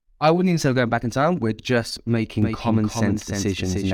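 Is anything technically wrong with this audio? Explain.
Yes. From 2.42 s to the end, the speech has a doubled audio track. A second full-band copy runs roughly a third of a second behind the original and somewhat quieter, around 5 dB down. It is likely a second capture through a slower path, or an edit leaving two misaligned copies. The copy switches on abruptly, with no decay or room colour. On a spectrogram, each syllable's harmonics reappear shifted right by a constant gap, and the waveform shows stacked, overlapping envelopes.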